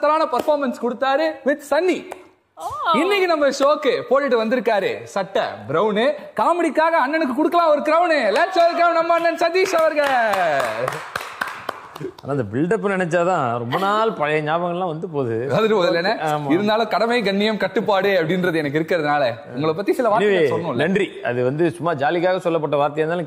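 No technical faults can be heard anywhere in the recording. Nothing in the audio stands out as a fault at any point.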